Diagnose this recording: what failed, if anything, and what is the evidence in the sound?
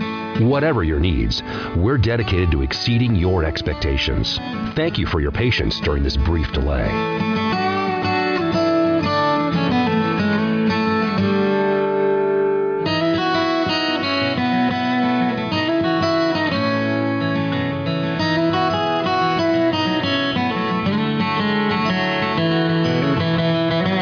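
Nothing failed; no stage shows any audible fault.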